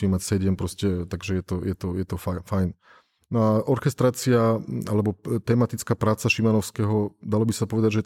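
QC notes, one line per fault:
No faults found in this recording.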